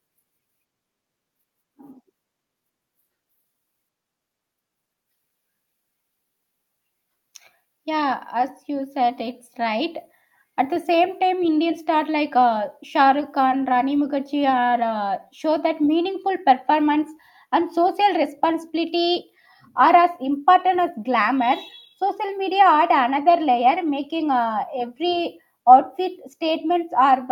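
Nothing here needs flagging; the recording runs along from the first moment to the last without anything going wrong along the way.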